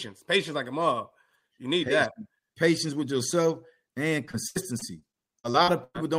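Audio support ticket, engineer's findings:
Repeated packet loss (robotic sound), 4.25–5.96 s, starting after "with yourself and". Choppy, robotic speech with pieces missing. Eleven gaps, longest 104 ms, about 0.40 s lost in total. Probable component: network path into the receiver's concealment stage. Lost or late packets recur in quick succession. Concealment extends the last sound across each hole, covering about 0.38 s, roughly 22% of the span.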